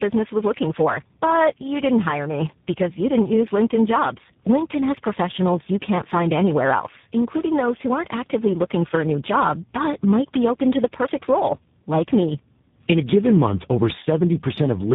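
Tandem speech coding runs throughout the clip. The speech sounds rough, muffled and warbly, with nothing above about 3.8 kHz. This points to the call passing through roughly three low-rate speech coders in a row, likely a GSM full-rate leg, a G.726 ADPCM leg and finally G.729A. Each border decoded the audio and coded it again, so every coder modelled the previous one's errors as if they were speech, and the distortions stacked.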